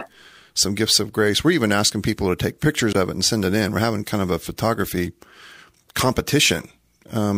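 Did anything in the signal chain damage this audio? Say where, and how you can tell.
Yes, there's damaged data in the compressed stream, so this one sits at the codec or storage stage. In this speech clip you get a short glitch from about 2.93 to 2.96 s, roughly 30 ms, that doesn't belong to the talker at all. Some bytes in the encoded file got corrupted there, so the decoder misread those frames, lost sync, and had to hunt for the next valid frame header before playback came back clean.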